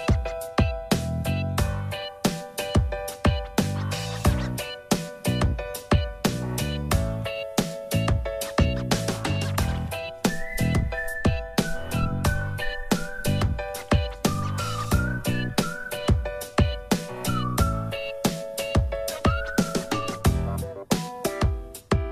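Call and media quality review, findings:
No audible faults found in the signal path across the clip; level, continuity and timing hold steady throughout, with nothing to attribute to capture, transport or playback components.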